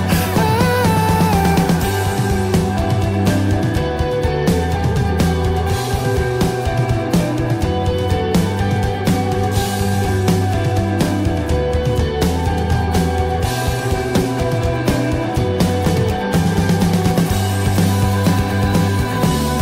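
No technical faults can be heard anywhere in the recording. Nothing in the audio calls for comment on the technical side.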